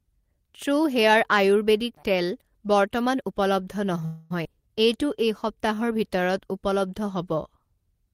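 From 4.05 to 4.32 s there is a call audio freeze. The last sound carries on for about 250 ms as a fading fill. Delayed packets likely emptied the jitter buffer.

At 4.44 s comes a skip ahead. Around 150 ms of speech is dropped, and the two sides join with almost no gap.

From 4.83 to 6.60 s a jitter buffer slow-down stretches the speech by 151 ms. It plays at 92% speed with unchanged pitch, so sounds are drawn out.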